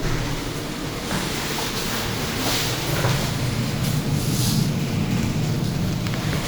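No audible technical faults.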